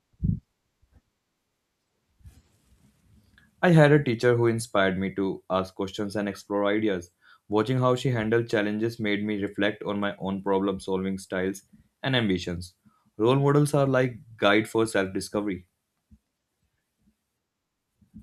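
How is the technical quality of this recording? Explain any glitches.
No glitches turn up here; the speech comes across steady and intact all the way, with nothing technical getting in the way.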